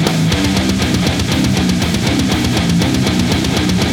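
Listening through the audio, nothing stood out as a technical fault at any point.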